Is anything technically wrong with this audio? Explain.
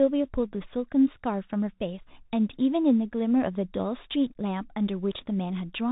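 Yes. Throughout, the speech passes through a Bluetooth CVSD headset codec, which fits a 64 kbps link. Its one-bit up-or-down encoder with an adapting step cuts everything above 4 kHz, so a spectrogram shows a hard ceiling there. Loud high sounds outrun the step and distort, s sounds turn scratchy, and a granular hiss lies under the speech.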